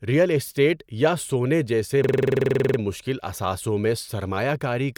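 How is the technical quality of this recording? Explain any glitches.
The recording has one clear glitch, a system hang loop from 2.04 to 2.79 s, between "اسٹیٹ یا سونے جیسے" and "مشکل اثاثوں میں". The system stalled while the sound hardware kept replaying its ring buffer. One 46 ms slice, which fits a 2048-sample buffer, repeats exactly 16 times at 21.5 Hz. The result is a rapid machine-gun stutter before the speech resumes.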